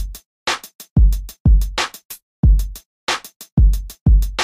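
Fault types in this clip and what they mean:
Nothing to flag here: no faults turn up anywhere in this sound.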